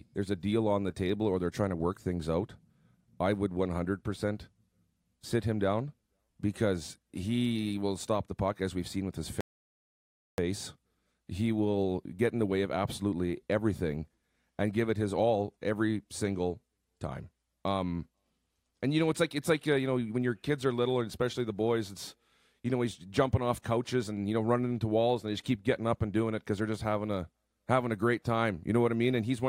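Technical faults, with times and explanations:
9.41 to 10.38 s, rebuffering stall: the player used up its downloaded audio and had to halt playback until more data came in over the network. The speech drops into silence for about 0.98 s, then picks up again exactly where it stopped, with nothing skipped or repeated. Because the gap is pure waiting rather than lost material, the clip simply runs 0.98 s longer than the original, and the break sounds like an abrupt pause mid-flow.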